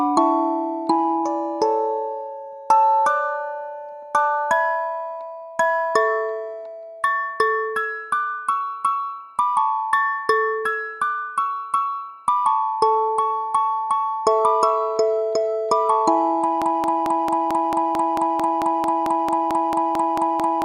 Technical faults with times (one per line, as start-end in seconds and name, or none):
16.62-20.64 broken-record loop